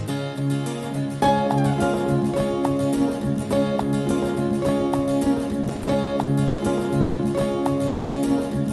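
The audio has passed through a WebRTC call path, with its top end stopping near 12 kHz as an Opus call codec would produce. Between 5.63 and 6.60 s it shows repeated stalls (stutter): eight short interruptions, the longest 110 ms, total 270 ms of filled-in sound, about 28% of that stretch. Packets were arriving late or slower than playback, so the jitter buffer kept draining and the receiver stretched the last sound over each gap. Nothing is lost, but the passage drags and stammers. Two call audio freezes follow, at 7.00–7.19 s (170 ms) and 7.87–8.18 s (290 ms). Each holds the last sound as a fading continuation rather than dropping to silence, then resumes where it left off, adding that much delay without losing content. The likely cause is packets being held up in transit until the jitter buffer ran dry.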